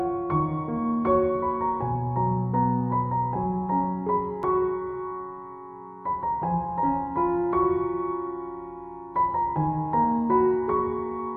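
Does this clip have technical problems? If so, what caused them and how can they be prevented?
Yes, there's a tiny jump in the sound at 4.43 s, likely a dropped buffer (overrun). The input wasn't read in time, so a couple of milliseconds were overwritten and the two edges butted straight together. A larger buffer or a higher-priority recording thread prevents this.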